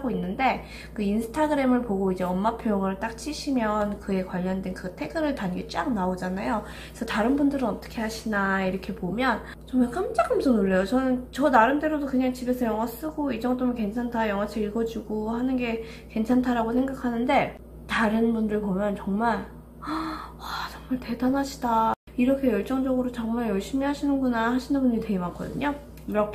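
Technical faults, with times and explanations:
No technical faults can be heard anywhere in the audio. Nothing in it calls for a time or an explanation.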